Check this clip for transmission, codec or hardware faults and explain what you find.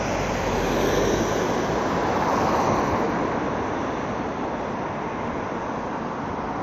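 No transmission, codec or hardware faults turn up in this clip.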